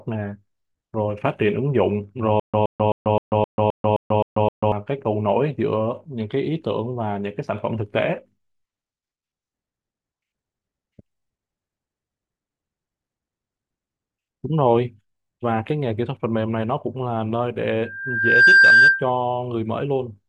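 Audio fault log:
2.40–4.72 s, stutter with silent gaps: the same 122 ms fragment of speech repeats nine times, each followed by 139 ms of digital silence, a steady 261 ms cycle. This is likely a stalled stream replaying its last buffer. The waveform shows identical blocks separated by flat silent stretches.
17.81–19.10 s, loudspeaker feedback squeal: a 1.6 kHz tone swells over roughly 0.7 s to about 10 dB above the speech, as the mic-to-speaker loop exceeds unity gain at that frequency. The spectrogram shows one bright horizontal line that thickens and brightens.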